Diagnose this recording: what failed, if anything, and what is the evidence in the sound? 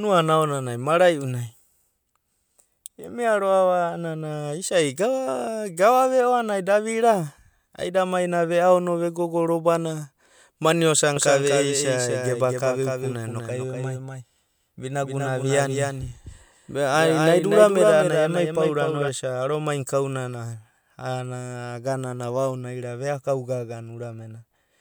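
From 11.16 to 19.08 s a dry copy about 5 dB quieter trails the speech by about a fifth of a second: a doubled audio track, likely a second, slower driver capture path.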